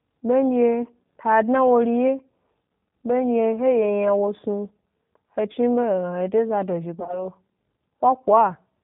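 Speech passed through a G.729 codec, the G.729A variant, and its damage is plainly audible for the whole clip. The coder models each 10 ms frame as a vocal tract filter fed by a pitch predictor and a handful of pulses, at a rate that sounds like 8 kbit/s. Nothing above 4 kHz survives, so the speech is band-limited, slightly rough and synthetic in tone. Between 7.00 and 7.23 s there is VoIP packet loss concealed by the speech codec. Roughly 40 ms of audio went missing, scattered across an 80 ms stretch, with no single gap longer than 20 ms. The decoder filled each hole by stretching its last pitch and filter settings while turning the gain down, so that stretch turns into a fading, buzzy or noisy extension of the voice. Because each frame builds on the one before, the speech stays weak and smeared after the dropouts until the decoder settles again around 7.23 s.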